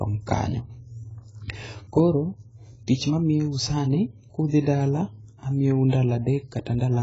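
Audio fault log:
Throughout: AAC compression. The speech sounds dull and smeared, with a warbling, fizzy texture on sustained vowels and sibilants, and nothing survives above 7.6 kHz. This points to heavy AAC-LC damage at a low rate, likely around 16 kbps. With so few bits for each frame of frequency lines, the encoder has lowered its cut-off, left gaps across the upper spectrum and quantised the remaining bands coarsely, so detail swims from frame to frame.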